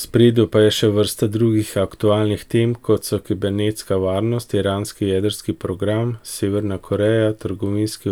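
Nothing stood out as a technical problem on listening to this speech recording.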